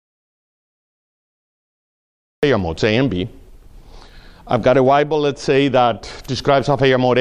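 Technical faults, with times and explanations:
0.00–2.43 s, audio dropout to silence: the input feed was most likely lost before the clip began, through a disconnected device, a broken link or a mute, while the recorder kept writing silence. The clip therefore opens in silence, with no room tone or noise floor at all, for about 2.4 s. The sound then arrives abruptly in mid-flow at 2.43 s, and whatever occurred during the gap is gone rather than merely quiet.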